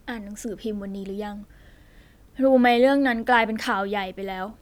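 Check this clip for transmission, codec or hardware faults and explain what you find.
Nothing turned up here: the speech comes across steady and whole, with no transmission, codec or hardware trouble to point to anywhere in it.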